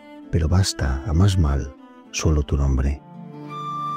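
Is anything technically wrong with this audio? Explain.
No, nothing technically wrong can be heard here: the signal stays steady and intact throughout, with no audible faults.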